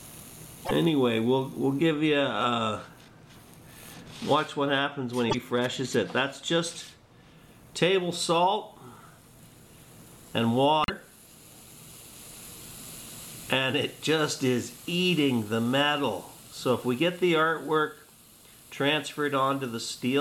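At 0.64 to 0.71 s, 5.29 to 5.35 s and 10.83 to 10.90 s the audio jumps ahead into a brief chirp, noise burst or gap, likely a broken MP3 bit reservoir after cut frames.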